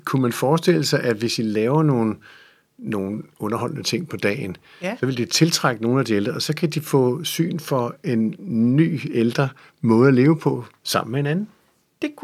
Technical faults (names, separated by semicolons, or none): none